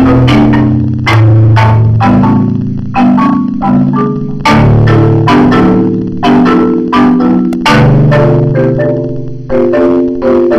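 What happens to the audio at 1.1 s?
At 1.13 s a repeated buffer occurs: a tiny block, about 1.5 ms, which fits a 64-sample buffer, plays twice when fresh audio arrives late. It sounds like a click, showing as a hard waveform discontinuity and a thin vertical broadband line on a spectrogram.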